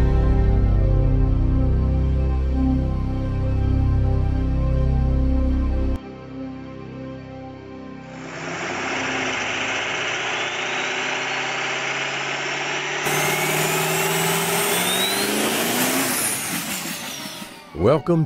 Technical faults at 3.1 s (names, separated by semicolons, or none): none